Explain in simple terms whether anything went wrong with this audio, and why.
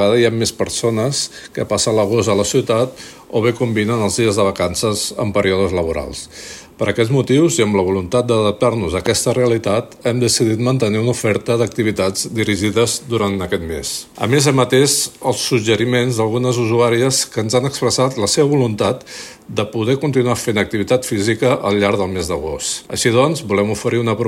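One thing went wrong: there's a loud pop at about 9.06 to 9.08 seconds. It's a single sharp click, over in a couple of hundredths of a second and much louder than the surrounding sound, while the audio keeps going underneath it. A pop like this is most likely a sudden jolt of voltage getting into the signal, from something like a cable being bumped, a switch flicking, or a static spark.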